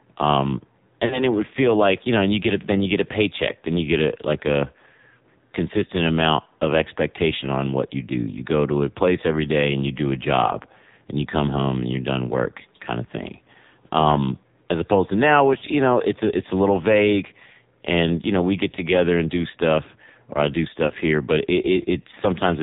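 Throughout, the speech passes through the AMR narrowband mobile codec. Nothing above 4 kHz survives, and heavy damage leaves it buzzy and synthetic, which fits a low rate near 6 kbps. At 1.06 to 1.23 s, 15.58 to 15.64 s and 20.88 to 20.94 s come lost AMR speech frames. The decoder repeated old settings at falling gain. Each is a brief warbling dip, with the last shortest, fitting one frame.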